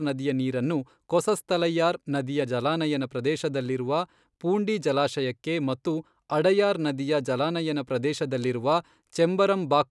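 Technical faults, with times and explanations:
No technical faults are audible anywhere in the speech.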